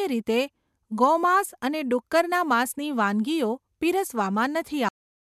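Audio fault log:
4.89–5.21 s, cut-off end: the speech stops mid-sound into flat digital silence with no decay tail, unlike a fade or natural ending, because the final buffers never played.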